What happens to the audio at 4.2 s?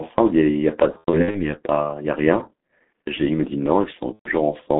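At 4.2 s the stream hits VoIP packet loss concealed by the speech codec. Between 4.13 and 4.30 s about 120 ms of data never arrived, which fits four lost 30 ms frames. The decoder fills the gap by repeating its last pitch and filter settings at falling gain, so the speech smears into a buzzy tone or coloured noise that fades. Because each frame builds on the previous one, the voice stays weak or distorted briefly after the data resumes.

All of this sits on the G.723.1 codec running through the whole clip at about 6.3 kbit/s. That low rate and its slow-updating voice model, confined to a 200 to 3400 Hz telephone band, leave the speech heavily muffled and hoarse, with blurred consonants.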